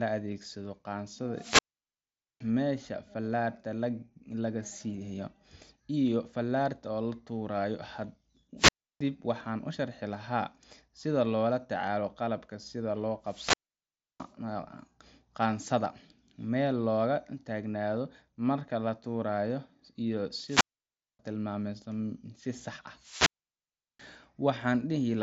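The analogue FM link from the wireless microphone fades five times, and each time the receiver's squelch closes, a wireless microphone squelch dropout. Each event is a swell of hiss, a hole of near silence, then the speech returning: 1.33 to 2.46 s (mute about 0.82 s), 8.57 to 9.01 s (0.32 s), 13.23 to 14.33 s (0.67 s), 20.45 to 21.19 s (0.59 s) and 22.98 to 24.08 s (0.73 s), all through a lightly grainy wideband Bluetooth mSBC headset path.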